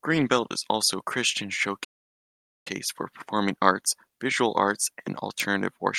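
A playback stall runs from 1.84 s to 2.67 s. The speech cuts to silence mid-flow for about 0.82 s, then resumes with "for performing arts visual". The likely cause is the player running short of data or its thread being blocked until output could continue.

An electrical switching spike lands at 5.40 s, right after "arts visual arts and". It is a sharp snap laid over the speech, likely from a nearby switch, motor or static discharge arcing and being picked up by the audio line.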